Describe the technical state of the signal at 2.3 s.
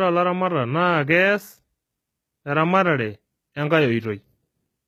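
At 2.3 s, as throughout the clip, the speech shows damage that is likely HE-AAC compression. The lower spectrum is coded directly, while the treble is rebuilt by copying lower bands upward under a coarse envelope, so upper harmonics no longer align with the true ones. The treble therefore sounds bright but synthetic, with s sounds turning gritty or lispy, and nothing remains above 14.9 kHz. The damage is plainly audible and fits a very low bitrate near 20 kbps.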